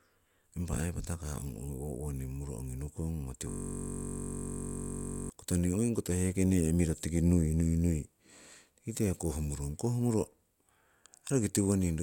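Speech with a steady 46.9 Hz buzz from 3.50 to 5.30 s, a system hang loop: a frozen driver kept replaying one 21.33 ms stretch, which fits a 1024-sample buffer.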